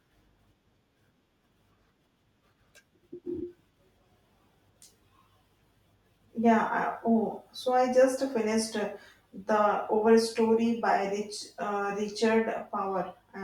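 The signal carries no audible technical faults anywhere in the recording.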